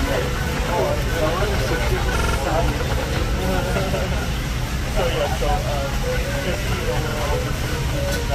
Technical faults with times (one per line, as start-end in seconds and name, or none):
2.18-2.37 repeated buffer
7.11-7.15 repeated buffer